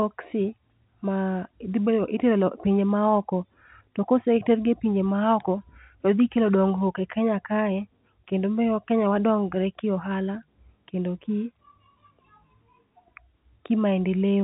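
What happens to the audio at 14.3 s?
Nothing goes wrong at 14.3 s: the speech carries on intact, with only the usual narrow telephone band of G.711 coding, nothing above roughly 3.9 kHz.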